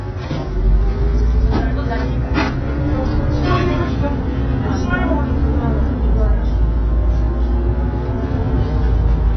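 Likely AAC compression at a starved bitrate, consistent with about 12 kbps, throughout: nothing above 6.1 kHz, leaving the sound dull, smeared and warbly, with fizzy, hollow texture.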